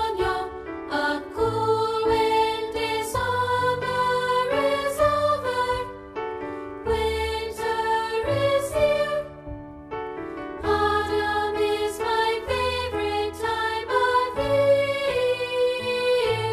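At 3.14 s the audio lurches forward with a brief blip, as if a stretch of the programme has been cut out and the two sides butted together with no transition. This is most likely a stream segment skipped: one chunk of a segmented stream failed to arrive or load, and rather than stalling, the player jumped straight to the next segment, so whatever that missing piece contained is simply absent from playback.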